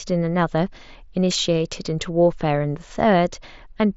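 No technical faults can be heard in the speech. It comes over a Bluetooth mSBC headset link, so nothing reaches above 7.7 kHz and the wideband codec leaves only a light coding texture on the sound.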